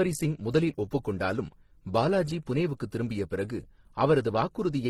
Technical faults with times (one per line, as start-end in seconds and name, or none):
0.00-4.89 transcoding between lossy codecs